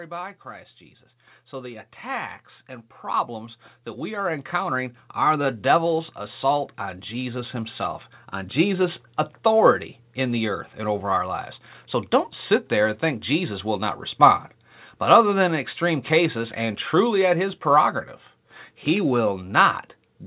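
From 0.43 s to 8.62 s the level climbs steadily by about 15 dB, settling just before "authority in the earth". This is automatic gain rising: the gain control judged the input too quiet and kept raising its gain over those eight seconds. The speech and the room noise swell together, which separates it from a talker moving closer to the microphone. Within the 4 kHz band of the call path, the slow, smooth climb also separates it from fast compressor pumping.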